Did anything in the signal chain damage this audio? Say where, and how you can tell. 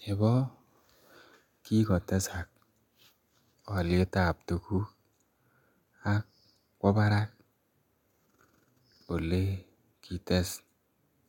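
No, nothing in this speech recording stood out as damage from any stage of the signal chain when I listened to it.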